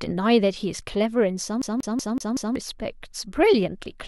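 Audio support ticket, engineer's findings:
CD stuck on one turn, 1.62 to 2.56 s. Symptom: the same 0.19 s slice of speech repeats five times, a brief mute at each jump, an even mechanical stutter. Probable component: disc or optical read path. Mechanism: a scratch knocks the laser back one track each rotation, replaying the same short span until it breaks free.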